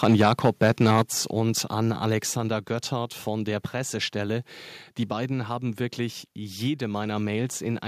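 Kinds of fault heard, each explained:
Microphone overload: The input gain was likely set too high, driving peaks about 6 dB past the converter's limit so their tops are sheared flat. From the start to about 1.0 s, a few percent of samples clip, giving the loudest syllables a harsh, crackling edge.
Microphone volume stepped down: The call software likely reacted to the overloaded input by cutting the device's input volume in single steps. Speech and background drop abruptly, by about 6 dB at 1.02 s as the clipping ends, then about 3 dB more at 2.19 s.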